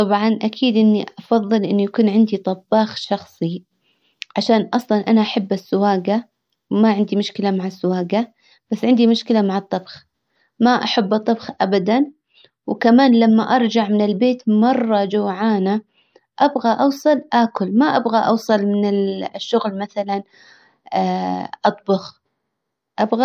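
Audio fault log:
No technical faults can be heard, and the signal stays steady and continuous across the whole recording.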